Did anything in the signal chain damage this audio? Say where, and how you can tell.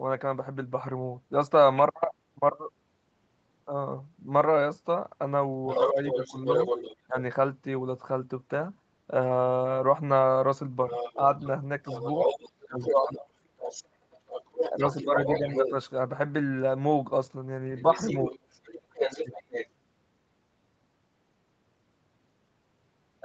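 Yes. A second voice leaks through from 5.67 to 6.96 s, 10.89 to 15.71 s and 17.77 to 19.68 s, only about 5 dB under the speech, later about 10 dB. This is other side's voice leaking through, likely residual echo the call processing's echo canceller failed to remove.

Overlapping those same stretches the speech itself dips in brief pieces: 5.86 to 7.16 s, 11.14 to 13.18 s, 14.7 to 15.74 s and 18.3 to 19.3 s, dropping roughly 5 to 15 dB. That is speech suppressed in double talk, likely the canceller attenuating everything while both sides overlapped.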